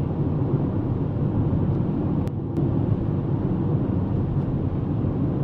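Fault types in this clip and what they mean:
one channel drops out: from 2.28 to 2.57 s the sound abruptly drops by about 6 dB, then snaps back to full level. The likely cause is one stereo channel going silent for that stretch, leaving the mono sum with only half the shared signal.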